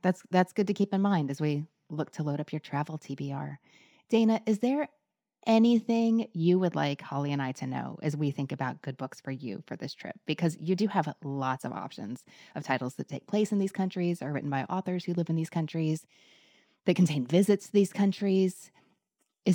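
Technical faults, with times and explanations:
Throughout: imaging from linear upsampling. The speech was raised to a higher rate by joining samples with straight lines, and the sound fits a 24 kHz original brought up to 44.1 kHz. That interpolation filters poorly, so the top of the original band is dulled and a faint mirrored copy of the spectrum remains between 12 and 24 kHz, roughly 40 dB down. It adds a light metallic shimmer to sibilants.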